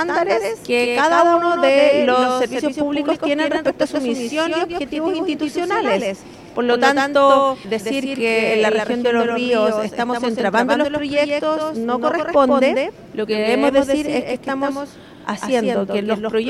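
The audio carries a doubled audio track from start to finish. A second full-band copy trails the original by roughly 150 ms, a few decibels quieter. It adds no decay or room colour. Likely cause: a slower second capture path mixed back in.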